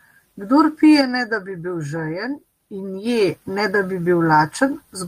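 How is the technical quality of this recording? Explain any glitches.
Nothing glitchy turns up in this speech recording; it holds steady the whole way, with no faults to point to.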